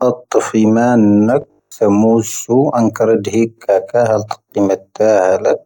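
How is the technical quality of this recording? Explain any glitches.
There's one clear glitch. From 1.42 to 1.76 s you get robotic sound from repeated short buffers: speech becomes a rigid metallic 50 Hz buzz, likely from 20 ms chunks replaying over most of that stretch.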